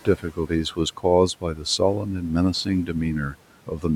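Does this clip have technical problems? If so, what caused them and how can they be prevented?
Yes. Speech was cut by the noise suppressor from 0.05 to 0.78 s and from 1.41 to 1.8 s. It mistook soft speech for noise and lowered it by about 12 and about 11 dB. Brief stretches sound swallowed. Gentler suppression settings would prevent this.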